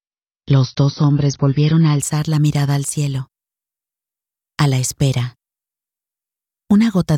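From 0 to 2.0 s the sound is dull. Nothing is heard above about 6.6 kHz. Codec artefacts are stronger. This is an adaptive stream starting at a low bitrate. The player began on a cheap version to start fast. The lack of treble fits an AAC stream near 29 kbit/s. At 2.0 s the quality jumps up with no gap. This points to a switch to roughly 96 kbit/s.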